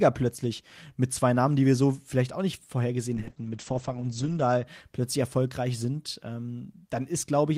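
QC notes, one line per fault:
3.15–4.71 s, call bitrate drop: after "so vielleicht auch nicht" the speech turns muffled and rough until "plötzlich erfolgreich sind". The encoder rate fell from 32 to 9 kbps, bottoming out for 1.27 s, coarsening the coding and narrowing the band from 20 kHz to 8 kHz.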